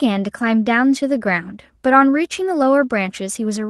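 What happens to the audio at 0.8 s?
At 0.8 s the speech comes through intact, with no dropout, glitch or distortion, only the ordinary coding character and roughly 12 kHz band limit of the call codec path it passed through.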